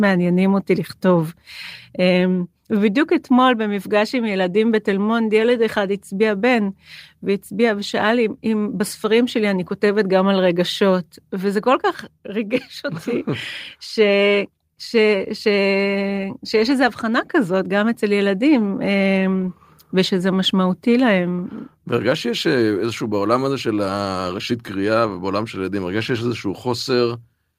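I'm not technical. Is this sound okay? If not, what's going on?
Yes, there's nothing wrong to report: no dropouts, clicks, distortion or glitches anywhere in this speech recording.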